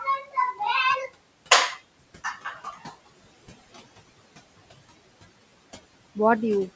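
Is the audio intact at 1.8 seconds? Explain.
No. Speech cut by the noise suppressor runs from 1.71 to 1.81 s: the suppressor mistook part of the speech for noise and pulled it down by about 13 dB, so that brief stretch sounds swallowed and faint. Noise suppressor artifacts are present here too, as it lowers steady noise by about 20 dB.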